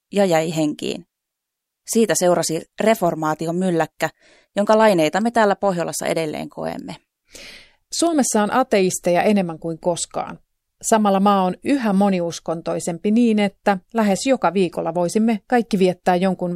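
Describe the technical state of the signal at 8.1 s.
At 8.07 s an electrical switching spike appears, likely a nearby switch, motor or static discharge arcing briefly and coupling into the audio line. It sounds like a sharp snap peaking around -20 dBFS, laid over the speech just before "on ateisteja enemmän kuin".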